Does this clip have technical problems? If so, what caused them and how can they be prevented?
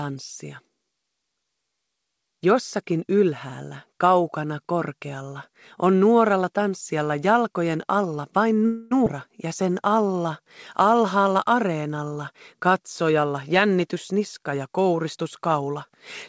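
Yes.

Call audio freeze, 8.66 to 8.93 s: packets were likely held up and the jitter buffer ran dry, so the last sound was stretched into a fading buzz for 250 ms before resuming intact. A steadier network path or a larger jitter buffer target would prevent it.

Skip ahead, 9.05 to 9.08 s: just after the freeze, roughly 150 ms was dropped, so playback jumps forward almost seamlessly with that stretch missing. Letting the buffer drain gradually instead of discarding audio would avoid it.

Jitter buffer slow-down, 9.48 to 11.18 s: with its reserve running low or its target delay just raised, the buffer repeated pitch periods to add 138 ms, slowing the sound to 92% speed at unchanged pitch. Reducing network jitter would prevent it.

Jitter buffer speed-up, 13.09 to 15.91 s: the buffer held excess audio and trimmed about 200 ms in small pieces, so the sound runs hurried at 108% speed. Smoother packet delivery, so that audio doesn't arrive in bursts, would prevent it.

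The audio also carries nothing above 8 kHz, consistent with the G.722 codec at 64 kbps on this call path.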